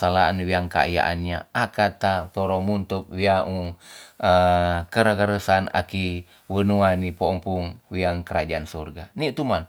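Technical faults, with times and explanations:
No technical faults are audible.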